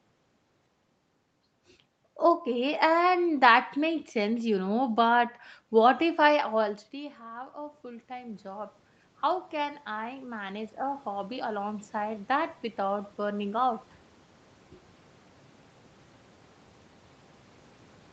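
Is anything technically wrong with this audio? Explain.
Yes. Automatic gain rising occurs twice: from 6.93 to 8.82 s, just after "but what if I", the gain climbs about 5 dB, then from 9.56 to 13.87 s about another 7 dB. The talker moving away around 6.5 s dropped the level about 14 dB, and the control slowly compensates, so voice and room noise swell together. The waveform envelope ramps up gradually, and the spectrogram's noise floor brightens with the speech.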